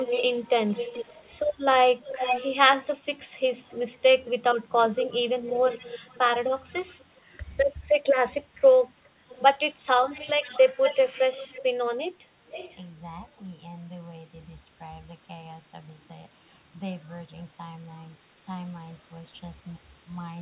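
Echo leak runs from 0.0 to 7.36 s: a copy of the speech returns about 451 ms late and roughly 10 dB below it, likely because a loudspeaker's output reached the far microphone and its echo canceller let part of it through.

Speech suppressed in double talk appears at 2.91 s and again from 6.85 to 7.43 s. The speech dips by around 10 dB, for roughly 70 ms and then roughly 150 ms in total, likely because the canceller confused the talker with the echo and turned both down.

A second echo leak follows from 9.29 to 12.82 s. Here the delayed copy trails by about 491 ms and is much fainter, around 20 dB down, capped like everything else at 4 kHz by the G.711 A-law call path.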